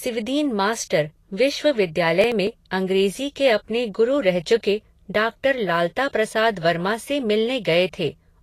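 A speech recording with Vorbis compression throughout. Nothing sounds above 14.2 kHz, and the treble turns hissy and grainy, likely from a low Vorbis bitrate near 34 kbps. From 2.21 to 2.60 s there is processor overload crackle. Several short audio buffers, roughly 5 ms each, are skipped over that stretch, leaving a gritty, tearing burst.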